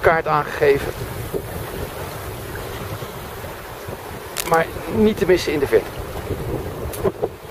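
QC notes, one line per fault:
4.37–4.56 s, cable scratch noise: a dense, uneven burst of scratching sits over the sound for about 0.19 s, only a few dB below the programme level. This likely comes from a worn cable or connector being moved, its contact resistance fluctuating rapidly.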